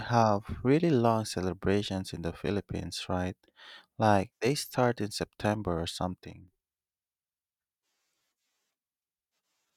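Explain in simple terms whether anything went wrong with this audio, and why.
A sudden gain jump happens between 6.26 and 6.48 seconds. For about a fifth of a second, the speech abruptly becomes noticeably quieter, then snaps back to its earlier loudness. The background noise drops and returns along with it, which shows the whole signal was turned down, not just the speaker. The likely cause is a volume change applied instantly from one sample to the next, with no gradual fade in or out.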